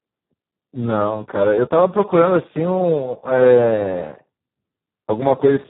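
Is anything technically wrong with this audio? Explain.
Yes. Throughout the speech, Speex codec damage is heavy: starved CELP excitation makes it noisy and hoarse, with nothing above 3.9 kHz. That fits a very low Speex setting near 4 kbps, unlike a clean low-pass filter, which would not add the noise.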